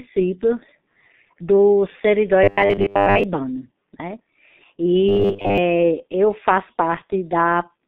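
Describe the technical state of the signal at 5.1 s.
Robotic sound from repeated short buffers runs from 5.09 to 5.58 s, just before "eu faço." The likely cause is a starved buffer replaying about 10 ms chunks, which leaves a rigid metallic 100 Hz buzz over most of that stretch. Throughout, G.723.1 codec coding at 6.3 kbit/s cuts everything above 3.6 kHz, leaving the speech heavily muffled and hoarse.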